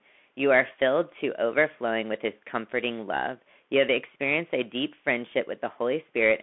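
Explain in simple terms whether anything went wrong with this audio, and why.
Bluetooth CVSD headset codec damage runs through the whole clip, from start to finish. The speech is squeezed into a narrow phone band, with nothing above about 3.8 kHz. It is coded as tiny up-or-down steps, so s sounds turn scratchy, loud parts distort, and a grainy hiss sits underneath.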